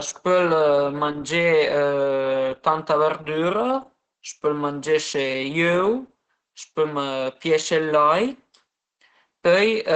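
The whole clip runs through heavy Opus voice compression. Nothing sits above about 8.8 kHz, so the speech is muffled, and the coarse SILK excitation coding leaves it hoarse and a bit robotic, which fits a bitrate around 10 kbps.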